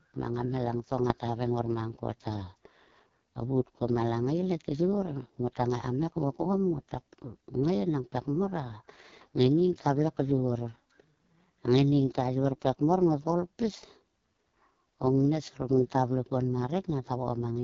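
From start to finish, the speech carries AMR wideband (HD Voice) codec damage, and it is heavy. The codec rebuilds the voice from a pulse-driven model of the vocal tract. It codes detail only up to 6.4 kHz, and fills the band just above with shaped noise. Nothing is heard above 7.4 kHz. The sound is rough and raspy throughout. That level of harm points to the codec's lowest rate, around 6.6 kbit/s.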